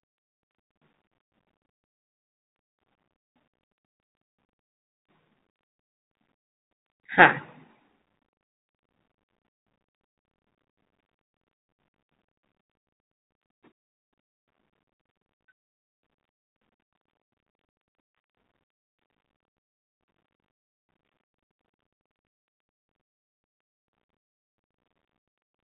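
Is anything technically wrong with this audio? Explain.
Yes. Throughout the speech, a Bluetooth CVSD headset codec is plainly audible: nothing passes above 3.8 kHz, and its one-bit up-or-down steps, consistent with a 64 kbps link, lag loud highs, so s sounds turn scratchy over granular hiss. A plain low-pass filter would dull without that grit.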